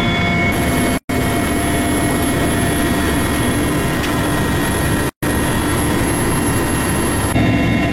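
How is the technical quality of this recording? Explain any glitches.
The recording has two gaps at joins of encoded pieces. The first runs from 0.98 to 1.09 s and lasts 117 ms. The second runs from 5.09 to 5.23 s and lasts 133 ms. The joins fall 4 s apart, so the audio was encoded in separate pieces and joined untrimmed. Each piece keeps its encoder's start delay and last-frame padding. The sound drops out, leaving silence with smeared edges, then carries on where it stopped.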